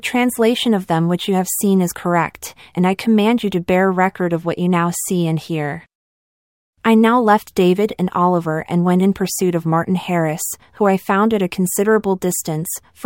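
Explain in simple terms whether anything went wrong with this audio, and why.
Channel delay (comb filtering) affects 4.30 to 6.78 s, between "you to bear record" and "I now left". One channel lags by about one sample, so combining them cancels the very top frequencies, near 20 kHz, slightly dulling the speech.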